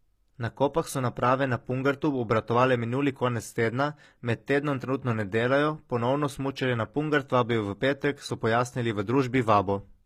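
Throughout the speech, the treble sounds bright yet gritty and lispy on s sounds. It is likely HE-AAC compression at a low bitrate near 24 kbps, rebuilding the highs by copying lower bands, unlike a plain dull low-pass.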